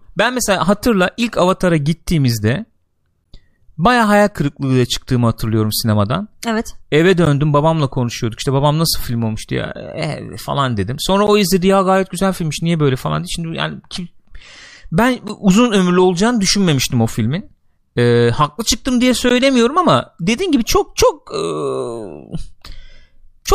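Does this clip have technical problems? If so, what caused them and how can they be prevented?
Yes. The speech was delivered in 4-second chunks, with 13 ms of silence inserted at each join, a gap between chunks. This punches short holes at 3.24, 7.25, 11.27, 15.28 and 19.29 s. Gapless playback that trims codec padding at chunk boundaries prevents it.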